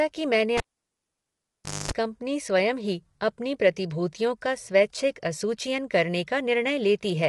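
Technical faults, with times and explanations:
throughout: low-delay AAC compression. The speech sounds rough and grainy, with a hiss filling the gaps between the pitch harmonics and nothing at all above about 11.6 kHz, so the top end is dull and slightly artificial. This likely comes from AAC-ELD, the low-delay codec used for video calls, at a bitrate that sounds like about 32 kbps. Its very short frames cannot separate closely spaced harmonics well, and at this low rate the noise that fills in between them stays plainly audible.
0.57 to 1.91 s: cable pulled and plugged in. A sharp pop at 0.57 s cuts the speech, and near silence follows for about 1.29 s while the plug is out. Just before it seats, about 0.24 s of 50 Hz mains buzz breaks through, because only the tip is touching and the unconnected ground lets hum from the power wiring in. A second pop at 1.91 s marks full contact, and the speech resumes.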